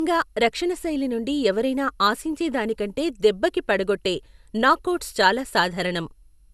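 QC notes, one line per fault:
Throughout: generation loss. The speech is swirly, hollow and smeared, with blurred consonant attacks and nothing above 12.6 kHz. That is worse than a single 128 kbit/s MP2-style encode would leave, likely from around seven re-encodes on shifting frame grids, each adding fresh quantisation noise and spectral holes.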